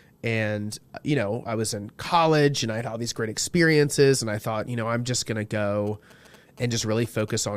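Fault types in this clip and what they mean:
GSM signalling bursts: From 5.87 s to 7.3 s, just after "I'm just going to", a galloping dit-dit-dit of short buzzes sits roughly 25 dB under the speech. A nearby 2G phone exchanging brief signalling bursts is being rectified by the audio circuit, giving a 217 Hz buzz repeated in clusters. A phone in an active call would produce a steady 217 Hz buzz. Mains hum sits at 50 or 60 Hz and never stutters.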